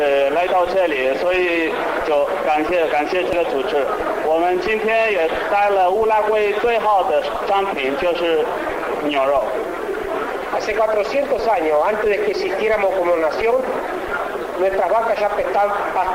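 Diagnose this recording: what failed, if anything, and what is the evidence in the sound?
Nothing in the recording points to a failure at any stage between capture and playback. No event in the sound needs a diagnosis.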